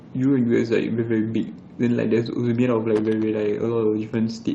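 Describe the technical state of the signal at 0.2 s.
At 0.2 s the speech signal is intact, with no audible fault at that moment.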